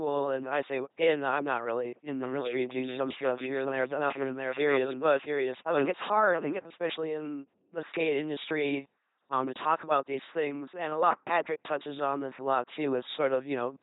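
Throughout the clip the speech carries the sound of an LPC-10 vocoder. Each moment is rebuilt as either a buzzy pulse train or noise passed through a simple vocal tract filter, so voices come out robotic and mechanical, with stray buzz or hiss wherever voiced and unvoiced sounds are confused. The damage is heavy and nothing is present above 3.8 kHz, which fits a 2.4 kbit/s vocoder. That all-or-nothing voicing separates it from a muffled low-bitrate codec.

From 2.24 s to 6.62 s a doubled audio track sits under the speech. A second full-band copy trails by roughly 0.7 s at about 5 dB below the original, likely from the same audio being mixed in twice. Unlike an echo or reverberation, it has no decay tail and no room colour, and it cuts in and out abruptly at both ends.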